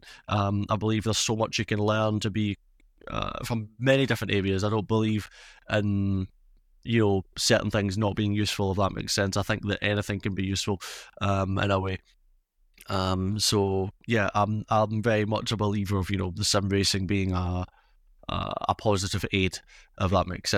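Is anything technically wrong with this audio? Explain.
No, nothing is technically wrong with this audio.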